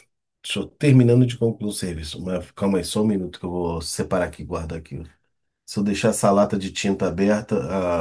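Speech recording, and nothing technically wrong can be heard anywhere in it.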